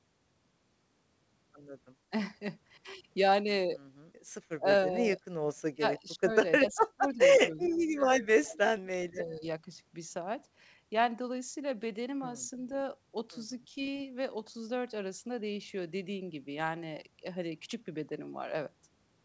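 From 5.72 to 6.3 s, 6.6 to 7.2 s, 7.48 to 8.85 s and 9.12 to 9.67 s, the speech drops by up to about 30 dB and breaks up, likely speech suppressed in double talk by an echo canceller.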